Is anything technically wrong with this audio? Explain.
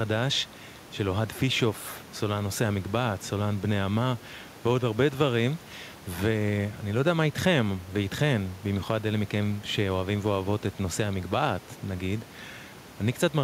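No, nothing in this speech clip points to a technical problem in the recording or playback chain. A low background noise from the room sits about 23 dB below the speech, and that noise belongs to the recording space rather than to the system.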